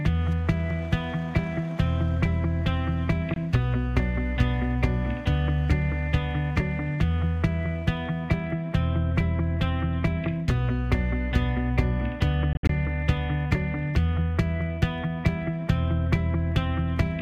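A block size mismatch (truncated) runs through the whole clip. One stage writes blocks longer than the next stage reads, and the tail of each block is discarded. That regular loss produces a steady buzz at 46.9 Hz, which fits a stage writing 1024-sample blocks. The size difference is tiny, so the speed-up is too small to hear. The audio plays at 1.0 times normal speed and keeps its pitch.

At 3.34 s the sound cuts out for about 20 ms, then resumes further along, as if it had kept playing. This is likely a Bluetooth dropout, where a late packet was discarded before reaching the headphones. The short hole fits a single lost packet. The gap is brief.

From 12.53 to 12.70 s a second dropout is more broken up. Silences totalling about 102 ms are scattered across roughly 160 ms, and the longest single gap is 61 ms. The sound stutters on and off through this stretch. Each return picks up later in the audio. 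This pattern is likely another Bluetooth dropout, with several packets failing to arrive in time.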